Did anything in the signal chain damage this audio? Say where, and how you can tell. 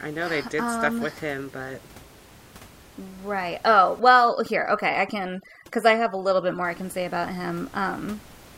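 Yes. From 4.00 to 6.64 s, overdone noise removal at the call processing stage drops the room noise, steady elsewhere about 25 dB below the speech, to near silence with twinkling specks. Bands near the noise estimate are cut, thinning quiet speech; codec damage wouldn't track the noise floor.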